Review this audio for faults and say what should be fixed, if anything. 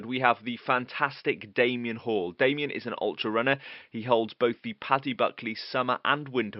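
No faults turn up in this audio, so nothing needs to be fixed.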